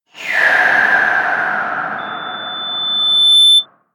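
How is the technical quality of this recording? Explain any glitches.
The recording has one clear fault, a loudspeaker feedback squeal. From 1.98 s to 3.66 s a single tone at 3.5 kHz swells over roughly a second and a half until it sits about 10 dB above the rest of the sound. The microphone is picking up the loudspeaker it feeds, and at that frequency the loop gain tops one, so the tone reinforces itself. A spectrogram shows a thickening horizontal line at 3.5 kHz, and the waveform envelope balloons.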